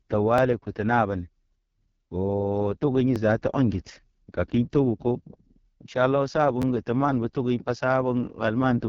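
From start to finish the speech carries heavy AMR wideband (HD Voice) codec damage. The voice sounds rough and raspy in the way that points to the codec's lowest rate, about 6.6 kbit/s. A spectrogram shows nothing above 7.2 kHz. The 6.4 to 7 kHz strip looks like smeared, even noise rather than real harmonic detail, and the harmonics below it look blurred and grainy.

A repeated buffer occurs at 0.38 s, at 3.16 s, and from 6.62 to 6.64 s. Each time, new audio missed its deadline and the device replayed the last block, about 11.6 ms long, which fits a 512-sample buffer. It plays one extra time at the first two points and twice at the third, and essentially no audio is lost. Because the block is so short, each repeat sounds like a click or a brief buzzy tick rather than a stutter. The third one is slightly longer. In the waveform, an identical short segment appears back to back, with a sharp discontinuity at each join.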